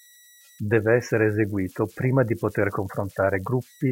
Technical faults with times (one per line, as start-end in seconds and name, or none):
0.00-3.91 converter idle tones